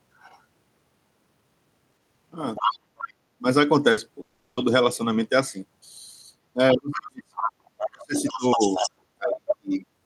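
Other side's voice leaking through in this speech clip at 0.19–0.39 s, 2.55–3.13 s, 6.92 s, 7.37–8.9 s and 9.31–9.75 s: a second voice sits roughly 5 to 30 dB below the talker, likely residual loudspeaker echo the canceller missed. Burst of packet loss at 3.91–4.00 s: about 60 ms of audio goes missing, bridged by a fading continuation of the preceding sound before speech resumes further on. Long network dropout at 4.21–4.60 s: about 360 ms is replaced by a stretched, decaying continuation of the last sound, never falling fully silent, before audio returns with that stretch lost. Speech suppressed in double talk at 6.55–7.38 s, 7.87–8.8 s and 9.18–9.84 s: the talker dips by up to roughly 40 dB or breaks up, likely because the far side was playing at the same time.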